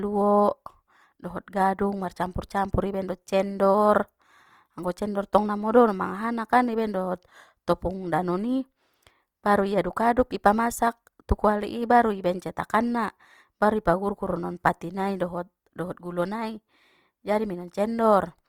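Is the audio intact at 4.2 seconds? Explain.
No. At 4.2 seconds, as throughout the clip, the speech sounds rough, grainy and noisy in texture rather than swirly. The full bandwidth up to about 20.3 kHz remains. This is likely Opus compression in its CELT music mode at a rate near 24 kbps, filling starved bands with folded or noise content.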